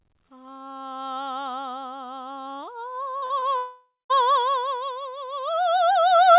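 Between 3.18 and 3.44 s, short concealed packet loss hits the music three times as audio packets fail to arrive in time. Two 40 ms gaps, at 3.18 to 3.24 s and 3.26 to 3.32 s, are followed by a 20 ms gap at 3.40 to 3.44 s. The receiver covers each hole by extending the preceding sound, so each one is heard as a brief smear or wobble before the real audio resumes.

From 3.58 to 4.12 s, a long network dropout, likely caused by a stall in packet delivery, leaves about 520 ms of music missing. The concealment stretches the last sound into a fading buzz or hiss, and the final 200 ms is silent before playback resumes past the lost material. The audio is band-limited to below 4 kHz, which fits a G.711 A-law call path at 64 kbps.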